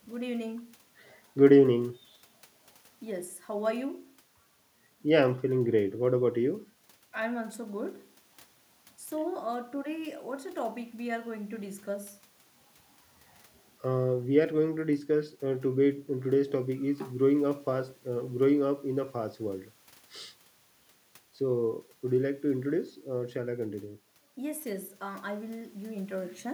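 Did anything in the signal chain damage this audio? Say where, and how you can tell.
No, nothing in the signal chain damaged this speech recording. No stage along the path leaves a mark that can be heard in the audio.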